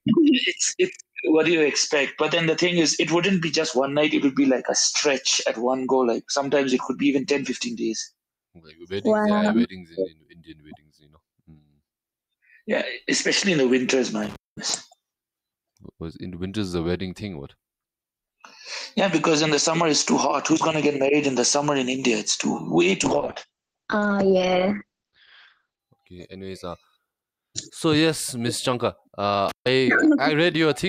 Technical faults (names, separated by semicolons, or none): noise suppressor applied to music or sounds; sound cut by the noise suppressor; intermittent contact; call bitrate drop